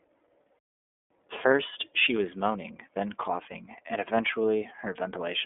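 iLBC codec damage runs through the whole speech clip. Each 30 ms block of the signal is coded on its own, with no help from the block before, and the coarse modelling that results gives the speech a slightly rough, synthetic grain that is plainly audible. The sound sits in a narrow telephone band of roughly 250 Hz to 3.5 kHz, with nothing above 3.7 kHz, so it is muffled and lacks sibilance. The degree of roughness fits the 13.33 kbps mode.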